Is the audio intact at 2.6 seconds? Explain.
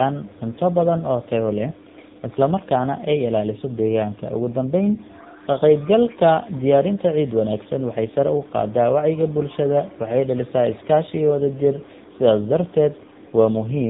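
No. At 2.6 seconds, as everywhere else in the clip, the speech sounds rough, muffled and warbly, with nothing above 3.7 kHz. This is tandem speech coding. The call passed through GSM full rate at 13 kbit/s, then G.711 A-law, then AMR-NB at 7.95 kbit/s. That is two lossy speech coders in a row, and the second re-encodes the first one's already damaged output, so their artefacts stack.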